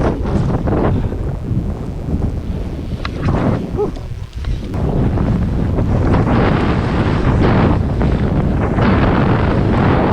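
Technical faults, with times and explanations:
Throughout: mains buzz. A steady, raspy buzz sits under the sound at about 30 dB below the signal, built on a 60 Hz fundamental. The harshness comes from sharp switching spikes, of the kind a dimmer or rectifier produces, getting into the audio path. Each spike repeats twice per mains cycle, so the energy spreads into a dense ladder of 60 Hz harmonics extending up to several kilohertz, rather than a smooth low hum.
4.97 to 4.99 s: skip ahead. Playback jumps forward here, and roughly a second of audio is simply gone. Nothing fills the hole, so the material on either side is butted together almost directly across a join of about 20 ms. This is what happens when a stretch of audio is discarded in transit, or when an overflowing jitter buffer throws it out while later audio is already queued. The delay then drops by about a second in one step.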